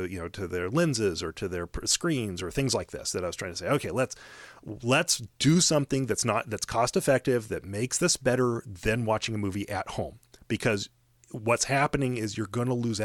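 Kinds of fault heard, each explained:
Nothing here stands out as a technical fault; the speech comes through without any dropouts, glitches or distortion to point to.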